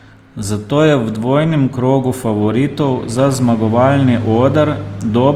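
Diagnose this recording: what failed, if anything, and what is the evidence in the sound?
The codec stage is where it went wrong: this speech has Opus compression running through the whole clip, most likely a low-rate encode around 24 kbps in music mode. Bands starved of bits get patched with folded or noise-filled content, so the voice comes out grainy and rough, though the bandwidth still reaches about 20 kHz.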